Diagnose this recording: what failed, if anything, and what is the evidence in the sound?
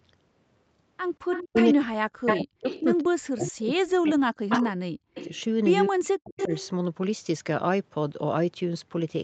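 Echo leak, at the call-processing stage. A delayed copy of the speech returns at 1.32–1.6, 2.26–2.83, 3.47, 4.05–5.41 and 6.3–6.7 s, lagging 190 to 207 ms and reaching about the speech's own level near 2.3 s. The likely cause is the loudspeaker side's echo canceller passing residual echo. Unlike room reverberation, this is a discrete repeat, not a decaying tail.

Speech suppressed in double talk, also at the call-processing stage. From 1.5 to 5.14 s and 5.87 to 6.51 s the speech dips and breaks into pieces, sinking by around 40 dB, while the other side is talking. The likely mechanism is an echo canceller ducking both talkers. Network loss would sound different, with abrupt gaps or concealment artefacts instead of these ducked fades.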